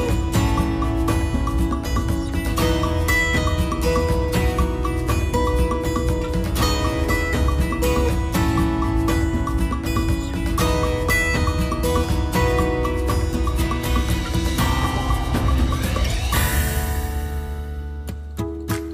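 No technical faults are audible.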